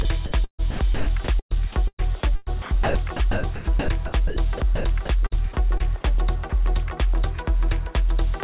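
From 0.02 to 0.05 s the sound gives way to steady noise for 30 ms. This is likely sound dropped by the voice detector, with the receiver filling the gap with comfort noise.

From 0.44 to 1.06 s the sound breaks into several holes filled with synthetic noise, 354 ms in all. The same happens from 1.39 to 2.95 s (547 ms), 3.31 to 4.85 s (600 ms) and 5.26 to 6.15 s (73 ms). The likely cause is sound chopped by the voice detector, which switched sending off and on repeatedly.

From 6.50 to 6.53 s another 30 ms is replaced by steady noise, again likely sound dropped by the voice detector.

Throughout, the call path's G.711 codec leaves nothing above 4 kHz.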